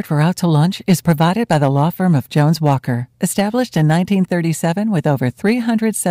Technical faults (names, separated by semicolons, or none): hard clipping